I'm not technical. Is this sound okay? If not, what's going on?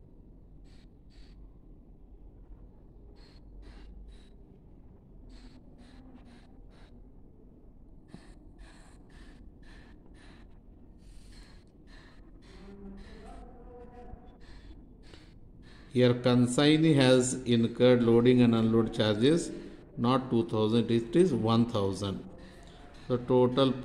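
Yes, no technical faults here, so nothing needs fixing.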